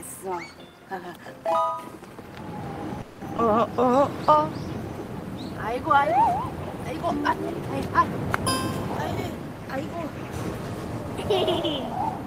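From 3.01 to 3.22 s the audio stalls, and the last sound is carried on as a fading buzz for about 200 ms before playback resumes where it left off, adding a gap without losing anything. This is a call audio freeze, likely from packets delayed in transit until the jitter buffer ran dry.

Between 3.37 and 3.39 s the sound jumps forward with almost no gap, roughly 70 ms of audio gone and the two sides butted together. That is a skip ahead: a stretch was dropped while later audio was already queued, so the receiver went straight to it.

From 3.80 to 4.37 s the audio drags, playing at about 90% speed with unchanged pitch and sounds stretched. This is a jitter buffer slow-down, where repeated pitch periods added about 62 ms to rebuild a reserve.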